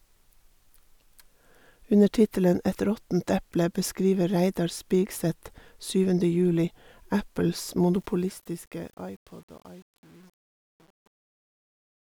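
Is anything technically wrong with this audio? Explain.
Yes. From 7.94 s, truncation distortion on a fade appears. The fade-out keeps too few bits, which points to 8-bit resolution, and adds no dither. From 8.36 s it grows gritty.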